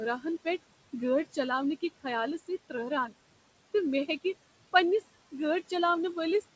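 A noise suppressor in the call chain works on the speech throughout, pulling down the frequency bands it judges to be steady background noise by about 21 dB. It does this frame by frame, so the room noise, which sits about 17 dB below the speech, drops away in the gaps between words and comes back up underneath them. The result is noise suppressor artifacts: a background that pumps in step with the speech, heard through a band that stops at 8 kHz, as fits a G.722 call codec.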